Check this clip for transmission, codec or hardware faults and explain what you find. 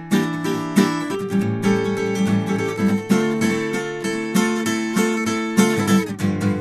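No transmission, codec or hardware faults.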